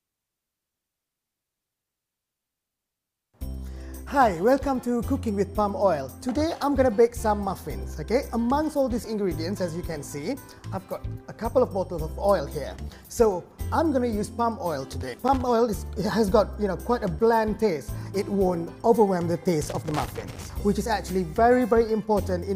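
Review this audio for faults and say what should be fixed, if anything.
Loose connector crackle appears at 15.01 to 15.41 s and again at 19.62 to 20.46 s: a worn contact intermittently breaks the signal path, chopping the audio into irregular scratchy bursts. Unlike steady vinyl-style crackle, it comes in isolated clumps. Cleaning or replacing the connector and securing the cable prevents it.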